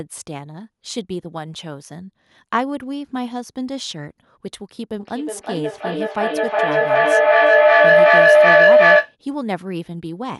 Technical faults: feedback howl

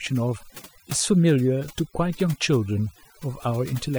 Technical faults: overdone noise removal

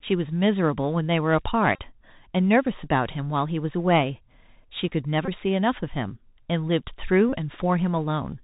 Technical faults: Bluetooth CVSD headset codec; Bluetooth headset packet repeated

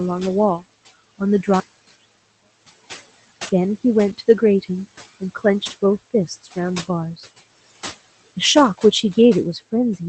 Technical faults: noise suppressor artifacts; one channel inverted; lost packet rebuilt from error correction; speech cut by the noise suppressor

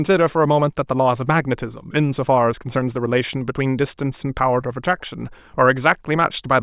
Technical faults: none

